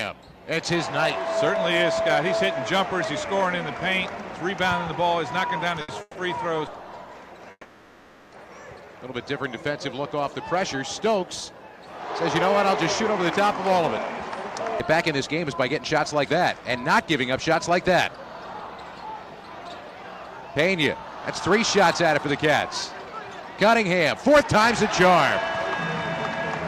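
At 5.81 s there's a short stall from a late packet. The jitter buffer ran dry, so the receiver held the last sound for roughly 70 ms until the packet turned up, then carried on. Nothing's missing; it's just a slightly stretched, buzzy moment.

Right after, at 6.01 to 6.17 s, and again at 7.51 to 8.34 s, you get a call audio freeze. The likely cause is packets held up in transit, emptying the buffer. The receiver extends the last sound as a fading buzz, dropping to brief silence (about 30 ms and 50 ms) before resuming where it left off. The first adds about 140 ms of delay, the second about 810 ms.

From 13.12 to 24.44 s there's a jitter buffer speed-up. The buffer was holding more audio than it aims for, so the receiver kept snipping tiny pitch-period-sized pieces out. The audio runs about 8% fast at unchanged pitch, shedding roughly a second overall, and it sounds a bit hurried.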